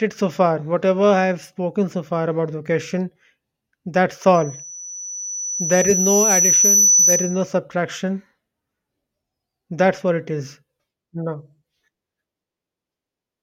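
Speech, with loudspeaker feedback squeal from 4.34 to 7.55 s: the mic-speaker loop runs away at 5.9 kHz, swelling over about three seconds to roughly 5 dB above the speech.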